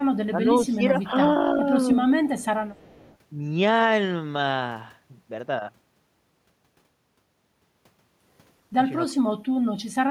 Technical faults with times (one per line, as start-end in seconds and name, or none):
0.29-1.13 speech suppressed in double talk
2.10-2.46 echo leak
2.71-3.17 echo leak
9.09-9.19 speech suppressed in double talk